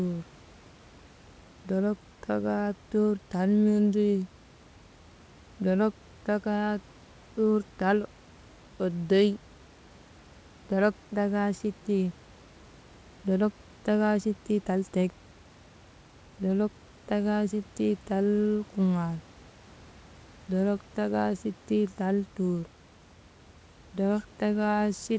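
Nothing stood out on listening to this speech recording; the call path's top end stops at about 8 kHz, and faint room noise sits about 29 dB below the speech.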